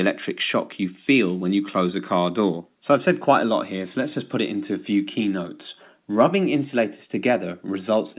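No technical faults are audible.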